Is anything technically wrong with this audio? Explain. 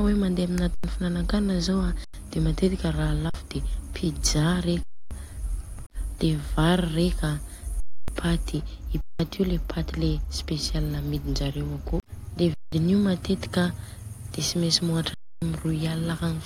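Yes. The speech stops dead eight times, going flat and silent without a click, then resumes with audio missing. This is an underrun with held sample: the output buffer emptied and the converter froze on its last value until data returned. The stalls fall at 0.74 s and 2.04 s (about 93 ms each), 3.30 s (47 ms), 4.83 s (279 ms), 7.80 s just before "paty I" (279 ms), 9.01 s between "paty I" and "io le" (186 ms), 12.54 s right after "akô de" (186 ms), and 15.14 s (279 ms). Roughly as much live speech as each stall's length is lost, a twentieth to a third of a second, so the words jump ahead. Most of the gap lengths fit whole 4096-sample blocks.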